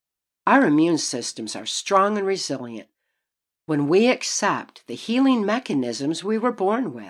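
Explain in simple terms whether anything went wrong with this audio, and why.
Nothing went wrong with this recording.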